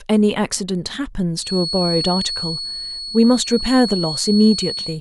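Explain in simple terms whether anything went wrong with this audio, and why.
From 1.33 seconds to the end, a thin whistle at a single pitch sits behind the speech. It is pitched high, at 4.4 kHz, and a bit quieter than the voice. This is a feedback whistle, likely from a loudspeaker's sound leaking back into the microphone and almost looping.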